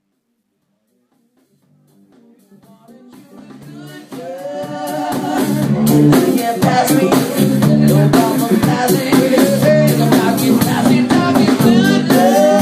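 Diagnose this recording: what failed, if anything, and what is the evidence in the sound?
Truncation distortion on the fade-in, 0.0 to 5.96 s, worst before 2.54 s. An undithered sample-format gain stage, consistent with 12-bit truncation, leaves the quiet start gritty.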